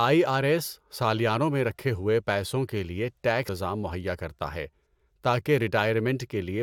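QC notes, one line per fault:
3.48 s, stream segment skipped: the speech lurches forward with a tiny blip, so a stretch of the talk just isn't there. Likely one piece of a segmented stream failed to load and the player carried straight on with the next.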